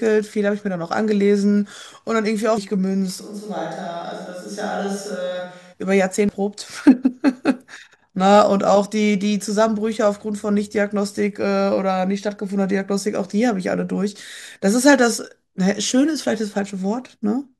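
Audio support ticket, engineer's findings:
Damaged data in compressed stream, 2.58 s and 6.29 s. Short chirp/blip each time. Decoder hit corrupt frame bytes, lost sync, resumed at next frame header. Spectrogram: thin broadband vertical streak, speech harmonics broken either side. Waveform: abrupt discontinuity, small missing stretch. Suspect transport or file corruption upstream of decoder; check stream integrity and container.

Switch to distant microphone, 3.22 s to 5.71 s. Sudden change to roomy, hollow speech with thinner low end, level down about 10 dB, room noise more audible at roughly 35 dB below speech. Abrupt return at 5.71 s. Likely cause: close mic dropped out, camera/room mic substituted. Waveform: lower envelope with a raised noise floor between words. Spectrogram: weaker bass, smeared reverberant tails, hard edges at both transitions.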